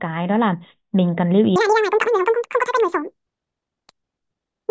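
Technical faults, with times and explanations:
1.56–4.70 s, wrong sample rate: speech suddenly runs twice as fast and a full octave higher, which fits 8 kHz audio played back at 16 kHz without conversion.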